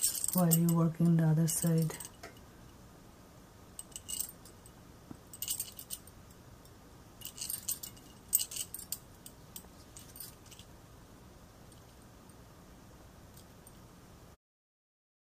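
Nothing stood out on listening, and the smooth fade-out in the final second eases the level down without any click or hard edge.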